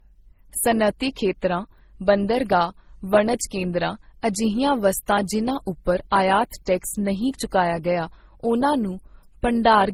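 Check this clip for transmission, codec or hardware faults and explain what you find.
One fault runs through the whole speech clip: transcoding between lossy codecs. Two sets of coding artefacts are heard layered together from start to finish, and nothing is present above 19.6 kHz. The likely cause is a 32 kbit/s MP3 encode re-encoded to Opus at 32 kbit/s, with the second codec spending its bits on the first codec's artefacts while adding its own.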